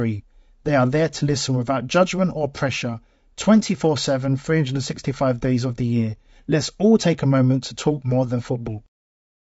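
Throughout, the speech sounds rough and grainy, with noise between harmonics, likely from low-delay AAC compression whose short frames, at roughly 32 kbps, cannot resolve pitch cleanly.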